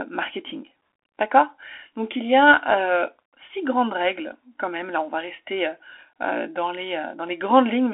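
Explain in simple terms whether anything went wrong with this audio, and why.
Yes, the whole recording has passed through a Bluetooth CVSD headset codec, the basic link older wireless headsets use for calls. It keeps only a narrow slice of the sound, roughly 300 Hz to 3.4 kHz, with nothing above 3.7 kHz, so the speech sounds thin and muffled throughout. Plain telephone filtering would also sound thin, but here the damage is plainly audible: s sounds turn scratchy and a grainy hiss sits under the voice, because the codec tracks the sound in tiny up-or-down steps that can't keep pace with fast changes.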